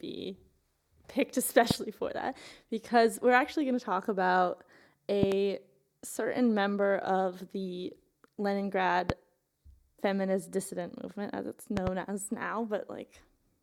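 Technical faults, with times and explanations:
1.71–1.73 s, 5.23–5.34 s, 9.10–9.12 s and 11.77–11.89 s, loud pops: sharp thumps about 15 to 20 dB above the speech, doubled at 5.23 and 11.77 s. The likely cause is voltage steps from a plug, switch, static or driver glitch that the downstream circuits shaped into brief pulses. The speech continues underneath.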